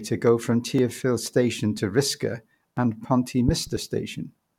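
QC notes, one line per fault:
0.79, 1.78, 2.77 and 3.77 s: audio missing between chunks. Four tiny skips recur one second apart, the first just after "to go from". Each loses only a few milliseconds, and the two sides join directly. The steady one-second spacing likely reflects chunk handovers.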